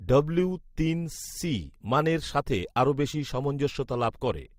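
Throughout the speech there is transcoding between lossy codecs, likely an MP3 encode near 64 kbit/s re-encoded with Opus near 32 kbit/s. Smeared, swirly MP3 artefacts sit under Opus's own coarseness, the second encoder spending bits reproducing the first's damage, with nothing above 20.1 kHz.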